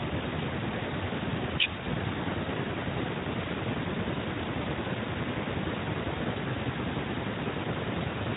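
No technical faults are audible in this speech recording, which passes through the Speex codec working as intended.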